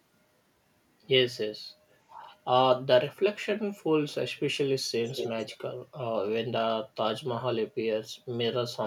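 From 5.06 to 5.57 s there is an echo leak. A far-end echo canceller likely failed to remove its own loudspeaker's sound from its microphone and sent it back. A copy of the speech trails 237 ms behind, about 5 dB quieter than the original.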